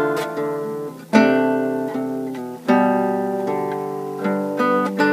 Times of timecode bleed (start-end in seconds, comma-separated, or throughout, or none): 2.52-5.12